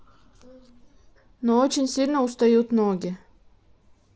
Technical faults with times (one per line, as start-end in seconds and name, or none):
none